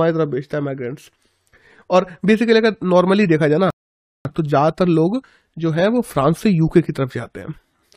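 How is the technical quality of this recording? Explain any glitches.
The recording has one clear glitch, a rebuffering stall in the speech from 3.70 s to 4.25 s. The player ran short of downloaded audio and paused until more arrived, so the sound drops abruptly to silence for about 0.55 s, then picks up exactly where it left off. What separates it from a dropout or packet loss is that nothing is skipped. The speech continues seamlessly, with only time added.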